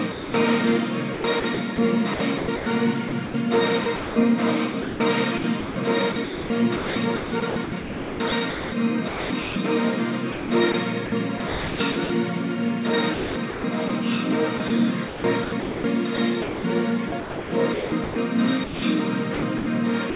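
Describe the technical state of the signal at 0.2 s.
At 0.2 s the sender's voice detector likely misjudged the signal as background and stopped transmitting, leaving sound dropped by the voice detector from 0.12 to 0.34 s. For those 220 ms the audio gives way to steady comfort noise, band-limited below 4 kHz like the surrounding call audio.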